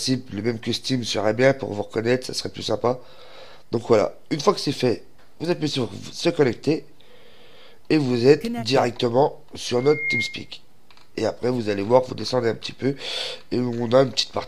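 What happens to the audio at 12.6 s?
Nothing goes wrong at 12.6 s: the audio plays through that moment intact, with no dropout, click, glitch or other fault.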